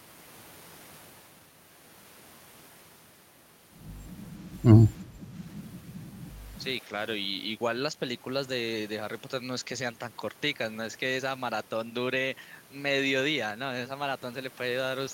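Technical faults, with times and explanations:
5.04–5.35 s, speech suppressed in double talk: for about a third of a second the speech sinks by about 5 dB, a brief dip where the level should hold steady, then returns. The likely cause is an echo canceller meeting double talk. With both ends talking at once, it could not tell the local talker from the loudspeaker echo it was meant to remove, so it turned down everything in the path, including the wanted speech.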